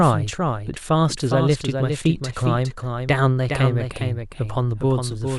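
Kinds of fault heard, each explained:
doubled audio track: A second full-band copy of the speech runs throughout, about 0.4 s behind and roughly 5 dB quieter. It has no decay or room colour, so it is not an echo. Likely the sound was captured twice or misaligned in an edit.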